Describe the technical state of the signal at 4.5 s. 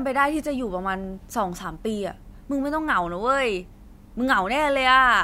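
At 4.5 s the speech signal is intact, with no audible fault at that point.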